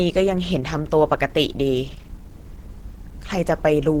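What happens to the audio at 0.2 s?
At 0.2 s the speech carries Opus compression damage, as it does throughout the clip. The grain is plainly audible. At about 16 kbps the encoder is likely in hybrid mode. A speech model codes the low band. The upper bands get energy envelopes filled with noise. This makes the voice sound hoarse and rough, even though content still reaches about 20.1 kHz.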